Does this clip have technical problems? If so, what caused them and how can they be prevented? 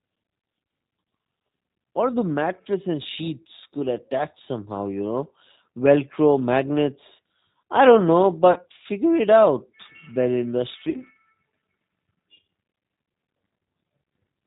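Yes. Throughout, the speech sounds muffled, slightly rough and synthetic, with nothing above 4 kHz. That is plainly audible G.729 codec damage: an 8 kbit/s coder rebuilds each 10 ms frame from a vocal-tract filter, a pitch predictor and a few pulses, discarding fine detail. Using a wideband codec such as Opus or G.722 would prevent it.

At 8.52 to 8.58 s, just after "magnets I don't know" and before "figure it out bed", and again at 10.90 to 11.03 s, just after "figure it out bed", the sound smears and fades before recovering. This is VoIP packet loss concealed by the speech codec. About 40 ms went missing each time, which fits two lost 20 ms packets. The decoder extrapolated from its last pitch and filter at falling gain, and the speech stayed weak or distorted afterwards. A stable network, an adequate jitter buffer and forward error correction would prevent it.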